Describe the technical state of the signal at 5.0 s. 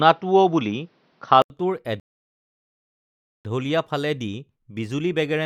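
At 5.0 s the speech signal is intact, with no audible fault at that moment.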